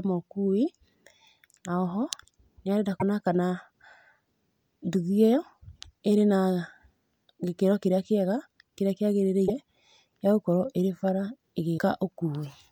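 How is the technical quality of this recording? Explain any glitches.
The speech has three short glitches. Broken MP3 bit reservoir at 2.99–3.02 s, 9.47–9.50 s and 11.77 s: likely dropped frames left the next frames reading borrowed bytes from the wrong place. Each produces a garbled blip about one 26 ms frame long as the speech skips ahead.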